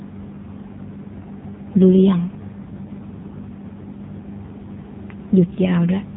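From start to finish the speech carries the signature of the AMR narrowband mobile codec. Everything above about 3.8 kHz is gone, so the voice sounds boxed-in and phone-like, and the heavy damage gives it a buzzy, synthetic edge, which fits one of the lowest AMR-NB modes, around 5.9 kbps. The codec rebuilds each 20 ms frame from a vocal-tract model and a few pulses, discarding fine detail. A spectrogram shows a hard ceiling near 3.8 kHz and smeared, blocky harmonics.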